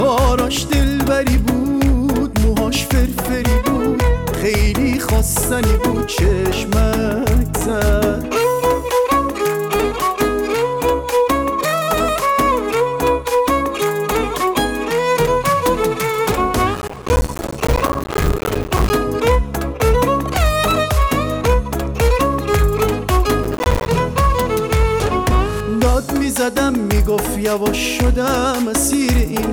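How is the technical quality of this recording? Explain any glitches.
The recording has two bursts of processor overload crackle, from 16.74 to 18.90 s and from 23.44 to 23.87 s. The processor repeatedly misses its deadlines for buffers of a few milliseconds, leaving hard-edged silent gaps that sound like gritty tearing. The waveform shows dense dropouts to silence, and the spectrogram shows thin vertical broadband streaks.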